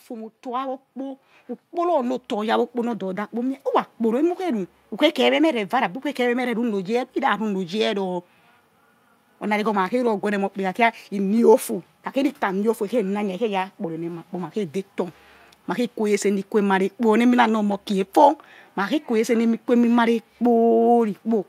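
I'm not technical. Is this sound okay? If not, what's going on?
No, not quite. There is automatic gain rising from 0.07 to 4.66 seconds. The recording device decided the input was too quiet and kept turning its own volume up, bit by bit, over those first four and a half seconds. Because it boosts everything it hears, the voice and the background noise grow louder together, so the start sounds like a slow swell. By "ukhe kheme meh re" the level has settled.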